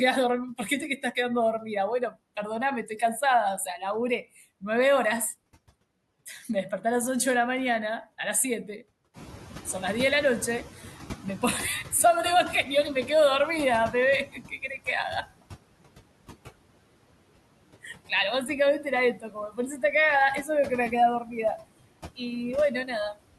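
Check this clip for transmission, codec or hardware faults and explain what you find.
The faults in this speech clip come from the noise suppressor. There is constant suppressor processing, four places where it clips the speech, and one stretch where it lags behind a rise in room noise.

Noise suppressor artifacts run through the whole clip. The suppressor pulls steady noise down by about 21 dB. It gates band by band, frame by frame. So the background dips in pauses and swells under speech.

Speech cut by the noise suppressor occurs at 0.58–2.16 s, 14.27–15.43 s, 17.83–19.83 s and 20.43–21.6 s. The suppressor misreads quiet speech as noise and turns it down. The deepest drops are about 13, 19, 16 and 8 dB. Only brief pieces are hit, from a fraction of a second to about half a second per stretch. The affected speech sounds swallowed or faint.

Noise suppressor catching up runs from 9.13 to 12.16 s. 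The room noise rises by about 14 dB around 9 s. The suppressor's noise estimate trails behind it. At first the louder noise leaks through with less reduction. Over about 3.03 s it sinks, settling at about 13 dB of cut.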